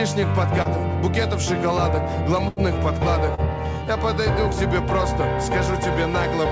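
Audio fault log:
0.62 to 0.68 s and 3.35 to 3.41 s, short concealed packet loss: about 30 ms never arrived, so the receiver stretched the preceding sound across the hole, leaving a quick smear or wobble.
2.48 to 2.60 s, burst of packet loss: roughly 90 ms went missing in one go. The concealment held and faded the last sound as a buzz or hiss before jumping ahead.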